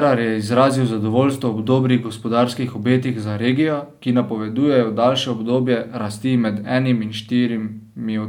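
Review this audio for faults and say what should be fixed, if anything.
No faults found; nothing needs fixing.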